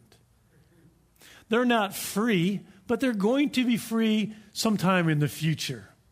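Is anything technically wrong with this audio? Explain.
No, the recording carries no audible technical faults, and the signal holds steady throughout.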